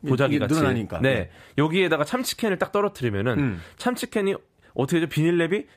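No technical faults can be heard in this speech recording.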